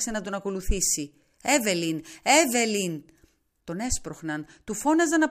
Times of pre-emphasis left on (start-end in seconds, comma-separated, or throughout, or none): 0.77-3.61